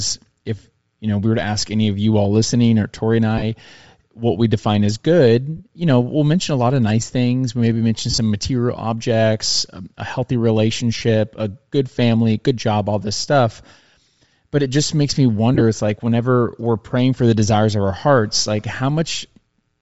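Throughout the speech there is a breathy, grainy edge on the upper frequencies, which is likely Bluetooth LC3 compression at a low rate, around 32 kbps with 7.5 ms frames going by the sound. The codec discards much of the top of the spectrum and fills the gaps with shaped noise. On a spectrogram the high band looks speckled and patchy rather than following the harmonics.

Lost LE Audio frames then break the sound five times. At 3.38 s there is a 37.5 ms gap. At 5.57 s a 30 ms gap falls just before "you know we'll mention". Between "maybe mention" and "material objects a um", starting at 8.10 s, about 60 ms is lost in short runs scattered over 75 ms. At 10.98 s there is another 30 ms gap. After "it just makes me", at 15.55 s, 37.5 ms is lost across 60 ms, in runs of about 15 ms. In each case the decoder repeats the last spectrum with scrambled phase, so the voice turns briefly into a hissy smear. 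On a spectrogram these show as short blocks of smeared, harmonic-free energy. In the waveform they appear as noisy patches.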